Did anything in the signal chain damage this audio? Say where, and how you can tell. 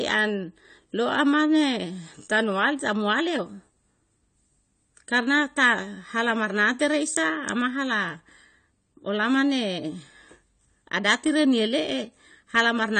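Yes, at the codec stage, throughout the speech. Nothing reaches above 9.1 kHz, so the sound is dull, and the damage is plainly audible as smearing and a warbling, fizzy texture on sibilants and held sounds. That is likely AAC compression, AAC-LC at a low rate that fits about 32 kbps, quantising each frame's spectrum coarsely. A simple low-pass filter or band-limited line would leave what remains clean instead of smeared and warbling.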